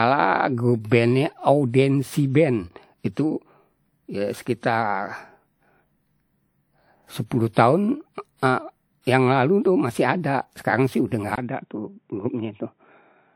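From the start, the speech carries a layered coding texture, with two different sets of compression artefacts sitting on top of each other. This points to transcoding between lossy codecs, likely an MP3 at around 96 kbit/s re-encoded to WMA at around 64 kbit/s. The second encoder spends its bits on the first one's artefacts. The band still extends to about 20.1 kHz.

At 11.36 s, after a gap of about 20 ms, the sound becomes narrow and boxy, with nothing above 3.8 kHz, and stays that way to the end. The level drops by around 5 dB, and a faint new noise floor appears. These changes are the likely result of the input switching to a poorer device.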